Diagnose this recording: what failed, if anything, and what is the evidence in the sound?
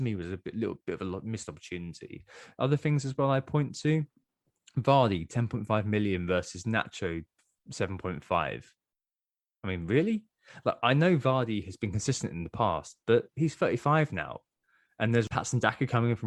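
Nothing failed; no stage of the chain shows audible trouble.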